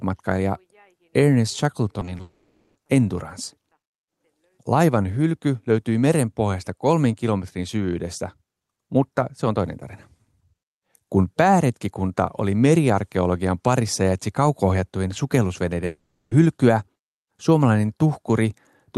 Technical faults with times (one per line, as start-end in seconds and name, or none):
1.99-2.21 short concealed packet loss
2.21-2.77 long network dropout
15.85-16.33 long network dropout